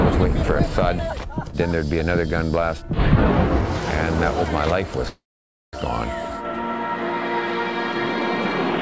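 At 5.08 s the sound stops moving forward: the last moment is drawn out into a brief buzzy tail that fades, then about half a second of silence, and at 5.75 s the audio picks up exactly where it broke off, with nothing skipped. This is a call audio freeze, likely caused by packets arriving late so the jitter buffer ran dry. The receiver filled about 650 ms, pushing everything after it that much later, all within a band that stops at 8 kHz, consistent with the G.722 call codec.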